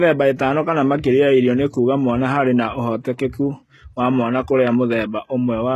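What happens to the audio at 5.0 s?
At 5.0 s, the speech carries the same HE-AAC compression damage as the whole clip. The treble is likely rebuilt by copying lower bands upward, so its harmonics misalign. Sibilants sound gritty and metallic. Nothing sits above 12.3 kHz, which fits roughly 16 kbps.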